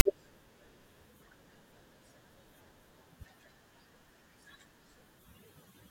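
It's a speech clip, and right at the start, from 0 to about 0.05 s, you get file tags played as audio: tag text decoded as samples, giving a short lopsided rasp with hard edges, then a bit of dead silence where the zero padding runs through.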